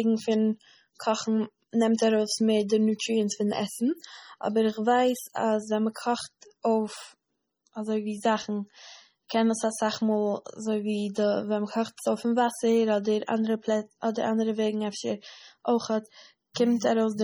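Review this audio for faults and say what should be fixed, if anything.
Heavy MP3 compression runs through the whole speech clip: watery, swirly sibilants and a dulled top end, likely from an encoder starved of bits, consistent with roughly 32 kbps. Re-export from the original source at a much higher bitrate, or use a lossless format.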